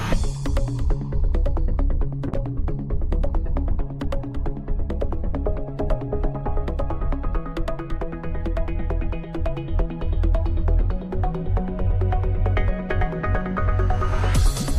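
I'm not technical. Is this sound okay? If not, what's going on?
No. From about 2.29 to 6.61 seconds there is a call bitrate drop: the connection judged it had less room to send data, so the system squeezed the sound into far less information for roughly four seconds. With so little to work with, fine detail is thrown away and the crisp top end is cut off, so that stretch sounds muffled, rough and watery until the quality returns.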